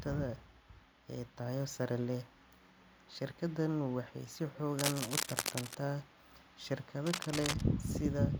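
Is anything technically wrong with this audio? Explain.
Yes. From 4.79 to 5.75 s, and again from 7.06 to 7.62 s, dense, uneven scratching and rustling sits over the speech: about as loud as the speech the first time, somewhat quieter the second. This cable scratch noise is likely a worn cable or connector being moved, its contact resistance jumping rapidly.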